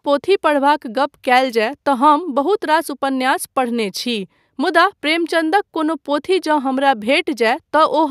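No technical faults are audible.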